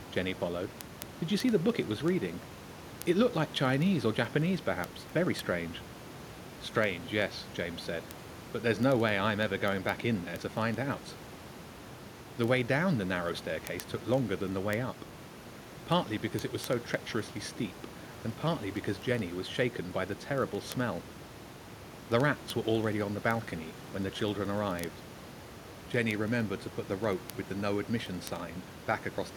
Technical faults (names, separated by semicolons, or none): word clock ticks